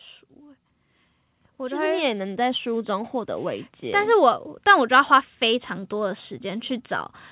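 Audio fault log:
1.57–6.98 s, automatic gain rising: from 1.57 s the level creeps up by about 9 dB and keeps climbing until 6.98 s, with the voice and the background noise swelling together. That's the AGC deciding the input was too quiet and slowly turning up its gain.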